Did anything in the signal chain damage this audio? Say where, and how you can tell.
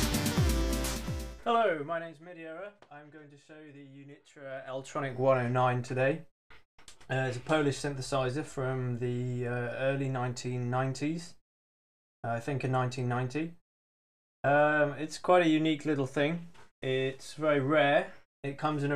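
Yes: a gain stage in the processing chain applies level changes in 2 dB jumps, about twenty per second, with no smoothing. That produces zipper noise: a ticking rides the sound from 1.48 to 2.28 s as it falls about 20 dB, and again from 4.38 to 5.14 s as it rises about 20 dB.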